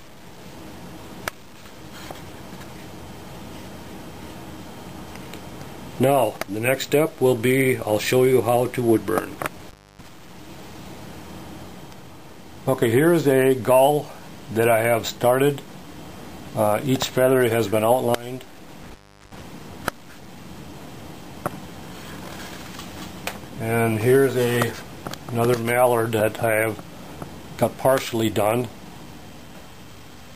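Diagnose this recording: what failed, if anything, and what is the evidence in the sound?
Intermittent contact in the analogue wiring. The sound drops out twice, from 9.60 to 10.08 s and from 18.83 to 19.42 s, with crackle at each edge and faint hiss through gaps of about 0.30 s and 0.37 s, as a loose plug or cable briefly opens the signal path.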